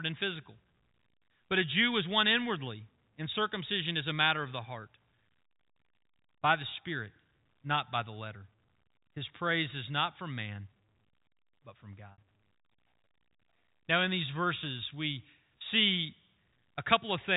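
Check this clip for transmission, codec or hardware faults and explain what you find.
One transmission fault is audible over a G.711 telephone path. From 12.12 to 12.18 s, just after "but from", packet loss with pitch repetition fills a 60 ms gap, consistent with three 20 ms packets. The receiver repeats the last pitch period, giving a brief held, buzzy tone before speech resumes.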